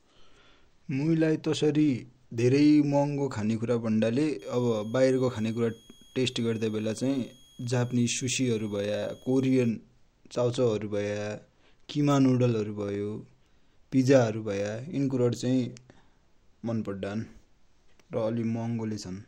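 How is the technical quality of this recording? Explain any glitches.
The recording has one clear technical fault, a switching supply whistle. From 4.39 to 9.69 s, a switching power supply falls into an audible burst mode and radiates into the audio path, adding a thin high whistle between 3.28 and 3.32 kHz, sitting roughly 30 dB under the speech and wavering slightly in pitch.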